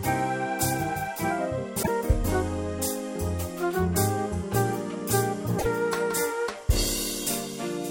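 At 1.79 to 1.89 s, and again at 5.55 to 5.66 s, the audio breaks into a short glitch, a chirp, squawk, click or brief hole, lasting roughly a tenth of a second. Both are damaged data in a compressed stream: corrupted bytes in the encoded frames cause the decoder to misread or discard them, lose frame sync, and scan forward for the next valid header. The misread frames and the search for the next header until it resynchronises are what produce the brief glitch.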